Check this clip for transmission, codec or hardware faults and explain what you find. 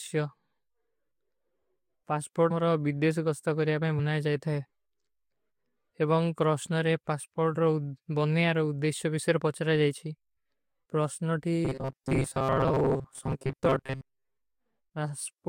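Two kinds of fault are audible in this speech, both consistent with data arriving late or damaged in transmission.

Compressed frames skipped, at 2.50 s and 3.98 s. At 2.50 s, just before "ବିଦ୍ଦେଶ କସ୍ତା କରିଯା ପେ", several compressed frames never reach playback, so around 150 ms of speech is lost. At 3.98 s, between that phrase and "ଜାଯତା ହୈ", a few more frames drop out, losing about 100 ms. The stream jumps forward by whole frames at each join.

Robotic sound from repeated short buffers, from 11.65 to 14.36 s. The speech collapses into a stiff metallic buzz pitched at 133 Hz. That pitch points to a fragment of roughly 7.5 ms being replayed over and over. The likely cause is audio arriving too infrequently, so playback loops the last short buffer while fresh material is discarded. Roughly half of this stretch is repeated audio. The speech rhythm is still loosely recognisable under the fixed buzz.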